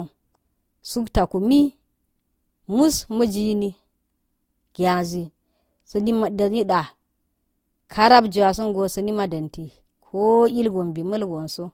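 Transcoding between lossy codecs is the likely cause throughout: the speech carries layered artefacts from two encoders and nothing above 16.6 kHz, fitting low-rate Opus re-encoded as Vorbis.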